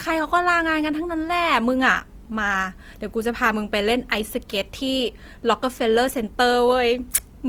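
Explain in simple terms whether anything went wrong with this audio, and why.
Something did go wrong: the speech sounds rough and grainy from start to finish, though it keeps its full brightness. That is likely Opus compression squeezing the sound too hard. Unlike MP3 damage, there is little swirly, watery warbling, just a steady gritty texture.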